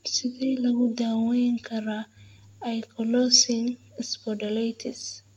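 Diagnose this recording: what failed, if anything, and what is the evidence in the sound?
Nothing in the chain seems to have gone wrong here; the speech comes across without any audible fault at any stage.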